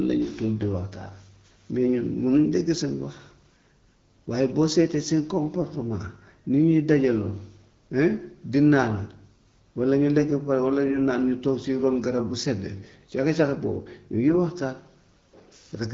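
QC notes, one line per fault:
10.88 to 10.98 s, AMR bit errors: right after "pare walla" the voice turns hoarse and gargly for about 0.11 s, a span that fits five 20 ms frames. Roughly 3 percent of the lightly protected bits arrived flipped while the checksum on the core bits still passed. Pitch and level hold, but misplaced excitation pulses and wrong fine gain and spectral values make it scratchy.
14.29 to 14.38 s, AMR bit errors: a second, shorter burst of about 0.09 s, about four frames, with a higher error rate near 5 percent. The same mechanism applies, against the light coding damage of the 12.65 kbit/s AMR-WB stream around it.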